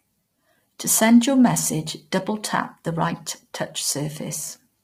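From start to finish the speech sounds rough and grainy, with a hiss filling the gaps between harmonics and a dull, artificial top band. This is likely low-delay AAC compression, with its short frames starved of bits, which fits heavy coding near 24 kbps.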